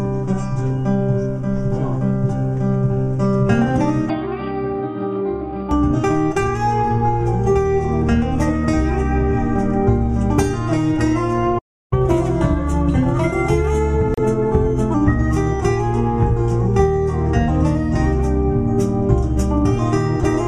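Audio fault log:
4.09–5.71 s, input switched to a poorer device: from 4.09 s the sound abruptly turns dull and boxy, with a level drop of roughly 5 dB and a new noise floor about 30 dB under the signal. It clears up again at 5.71 s. There is no gap at either transition, which points to the recording likely jumping to a narrower-band microphone or headset call profile and back, each device bringing its own bandwidth, gain and hiss.
11.58–11.93 s, playback stall: the output falls silent in mid-flow for about 0.33 s, then resumes. The sound simply stops rather than fading or glitching, which is characteristic of a player whose buffer ran empty or whose audio thread was blocked, so nothing reached the output until data flowed again. This likely reflects a starved or held-up playback pipeline rather than anything in the recorded material itself.
11.93–14.94 s, catch-up at higher speed: immediately after the stall the audio runs at 1.1 times normal speed for about 3 s, with pitch raised by about one and a half semitones. 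Both shift together because the player is resampling its accumulated backlog to recover the time lost in the gap. At 14.94 s, speed and pitch settle back to normal.
14.14–14.19 s, Bluetooth stall: inside the sped-up stretch, the sound drops out for 32 ms and then carries on. A gap this short, followed by a clean resumption, fits the wireless link being the likely cause: interference delays packets, the headphones' small buffer empties, and playback pauses briefly until the retransmitted audio arrives and refills it.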